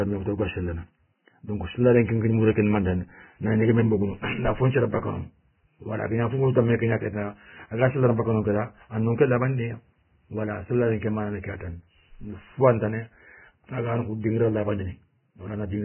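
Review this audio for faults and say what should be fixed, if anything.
Throughout, the speech sounds hissy and grainy, with nothing above 3 kHz. Heavy Vorbis compression is the likely cause, fitting a very low bitrate near 10 kbps. Encode at a higher bitrate.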